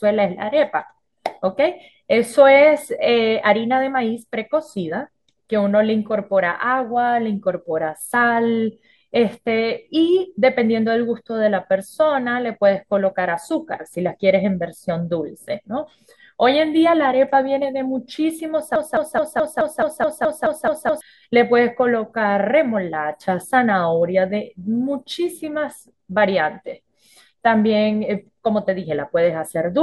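Speech, where a stalled player or stream likely kept resending its last fragment from 18.76 s: a broken-record loop repeats the same 213 ms piece eleven times until 21.01 s, and the speech due there is lost.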